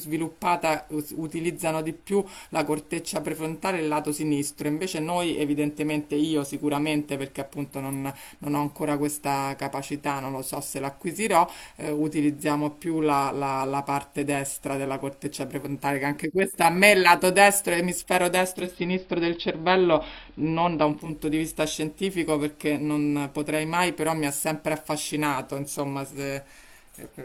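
At 18.37 s the speech turns dull and faintly hissy. This is digital radio blending to analogue. The receiver lost the digital signal and cross-faded over 0.42 s to the AM broadcast. Hiss sits roughly 40 dB down. Level shifts about 1 dB. Digital returns at 21.23 s.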